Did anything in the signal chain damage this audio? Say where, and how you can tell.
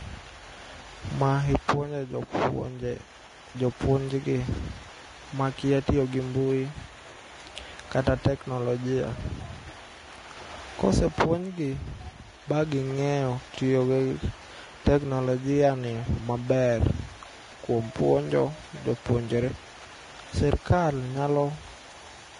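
Yes, at the codec stage, likely Vorbis compression, throughout. Nothing above 10.6 kHz remains, and coarse treble quantisation leaves grainy hiss and smeared consonant attacks, which fits a low bitrate.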